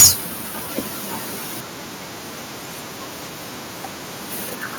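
Microphone overload hits this speech clip from 0.00 to 0.09 s, right at the opening, where the first burst of sound arrives with a harsh, crackling edge and a flattened, squared-off quality. The likely cause is an input gain set too high, driving the signal about 16 dB past the converter's ceiling, so the waveform tops are sheared off. Around two fifths of the samples in that brief stretch are clipped, which produces the gritty distortion.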